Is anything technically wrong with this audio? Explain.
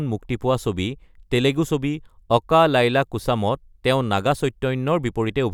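No, nothing technically wrong is audible in this speech recording.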